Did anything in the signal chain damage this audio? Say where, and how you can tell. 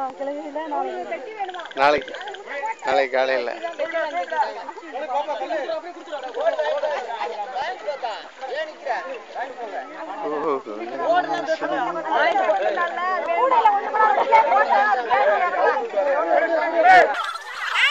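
Yes. From 17.14 s to the end at 17.90 s, the audio is read two samples at a time (double speed): a sample-format or channel-count mismatch plays it twice as fast, a full octave up. On a spectrogram, harmonics jump to double spacing.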